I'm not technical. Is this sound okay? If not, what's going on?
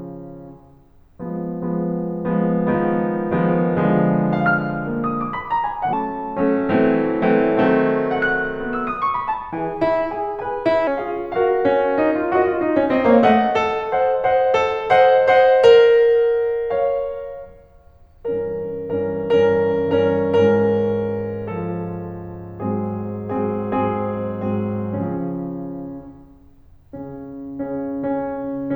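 No. From 5.93 to 10.87 seconds the music jumps ahead, hurried and about three semitones higher: a section at the wrong speed, 1.18 times too fast, likely from playback on a mismatched clock.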